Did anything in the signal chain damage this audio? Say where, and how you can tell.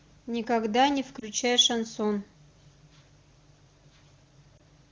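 Yes. At the radio/network stage, speech frames failed their checksum. This is lost AMR speech frames, with a brief dip or warble at 1.19–1.28 s and 4.58–4.60 s, each consistent with one 20 ms frame. The AMR-WB decoder bridged each gap by reusing the previous pitch and vocal-tract settings at falling gain.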